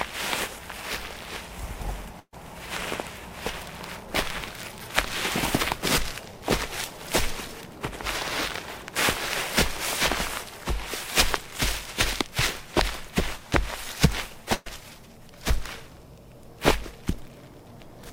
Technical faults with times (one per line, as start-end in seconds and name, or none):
2.19-2.34 burst of packet loss
14.54-14.68 burst of packet loss